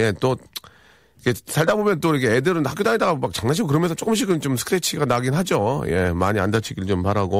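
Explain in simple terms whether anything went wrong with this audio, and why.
Nothing went wrong here: the speech carries no audible technical fault anywhere in the recording.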